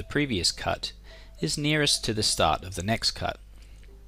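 No technical faults can be heard anywhere in this audio. Nothing in the sound points to a problem in how it was captured, processed or delivered.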